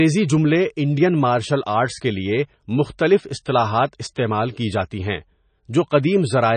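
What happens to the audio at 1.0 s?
At 1.0 s the speech carries the same damage heard across the whole clip, from start to end. It sounds watery and swirly. Sibilants turn into metallic chirps, and consonant attacks smear. Nothing is heard above 9 kHz. The likely cause is heavy MP3 compression. Short of bits, the encoder drops the treble at a fixed cutoff. It zeroes weak frequency lines, which blink on and off between frames. The damage points to a very low bitrate, near 26 kbps.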